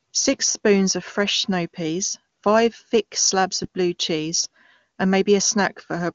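No faults in this speech clip: it runs through the AMR wideband (HD Voice) codec at 23.85 kbit/s, with the band ending at about 7.1 kHz as that codec's wideband limit dictates, and any coding damage is faint at most.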